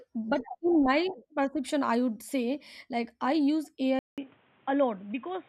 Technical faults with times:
3.99-5.48 input switched to a poorer device

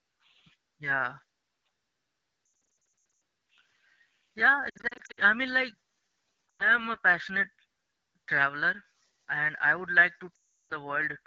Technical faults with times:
0.00-11.26 AMR wideband (HD Voice) codec
2.45-3.21 lost AMR speech frames
4.69-5.20 lost AMR speech frames
6.50-6.88 lost AMR speech frames
10.36-10.72 lost AMR speech frames

